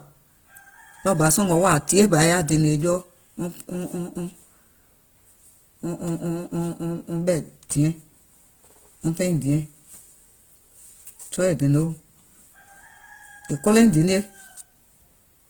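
All the way through, the speech comes out grainy and rough, likely Opus compression in music mode at a rate pointing to about 16 kbps, though it still reaches 20.2 kHz.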